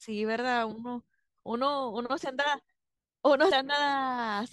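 Sample clock jitter runs through the whole speech recording. The converter's clock wanders by something on the order of a microsecond, so each sample is captured a little early or late. The resulting error scales with how steeply the waveform is changing. It shows up as a fine hiss or grittiness riding on the speech, roughly 40 dB below the signal, strongest on loud passages and sibilant, high-frequency sounds, and absent in the pauses.

At 3.51 s there is damaged data in a compressed stream. A short stretch of the encoded bitstream is corrupt, so the decoder cannot parse the frame there, loses frame sync and has to hunt for the next valid header before it can resume. The result is a brief, unnatural blip or chirp lasting only a few hundredths of a second.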